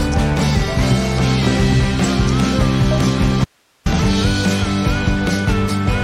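An audio dropout to a faint residue occurs from 3.45 to 3.86 s. The sound cuts off abruptly for about 0.41 s. Only hiss remains, roughly 45 dB below the signal. The likely cause is a brief loss of the feed while the downstream path stayed live.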